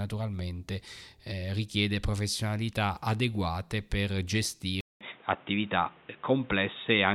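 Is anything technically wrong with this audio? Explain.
Yes. At 4.81 s the input likely switched to a poorer device, one that passes nothing above 3.8 kHz. After a 200 ms silence at the switch, the speech continues at much the same level but sounds dull and boxy, over new background noise about 30 dB down.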